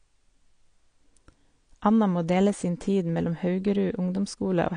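Throughout the recording, the speech has most likely been through AAC compression at a low bitrate, with damage consistent with AAC-LC at around 32 kbps. With so few bits, the encoder cuts the high band back and quantises the remaining spectrum coarsely, leaving gaps. The speech comes out dull and smeared, with a warbly, fizzy texture on sustained vowels and sibilants, and the damage is plainly audible from start to finish.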